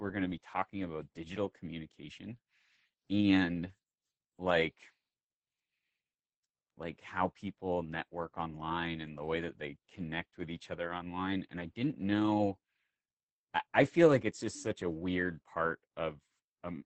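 From start to finish, the speech carries heavy Opus voice compression. Nothing survives above 8.6 kHz. The SILK linear-prediction coder's coarsely quantised excitation leaves the speech muffled, hoarse and faintly robotic, which points to a bitrate of around 10 kbps.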